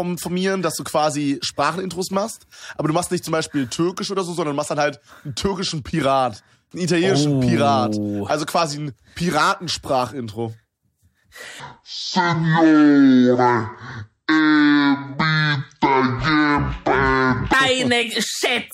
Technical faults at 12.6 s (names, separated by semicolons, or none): section at the wrong speed